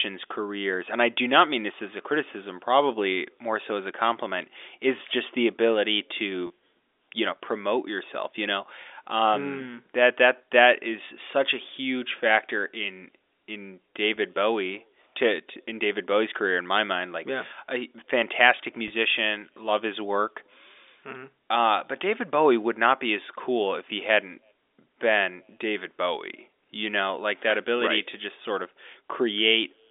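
Three short dropouts show packet loss with pitch repetition. Right after "is just the ability", from 6.47 to 6.50 s, about 30 ms goes missing, which fits three 10 ms packets. After "huge factor in in", at 14.16 s, it's a 10 ms gap. After "like yeah a fantastic", from 18.88 to 18.90 s, it's 20 ms. Each time the receiver fills the hole by looping the last pitch period, so you hear a brief buzzy hold rather than silence. The G.711 telephone band sits around it.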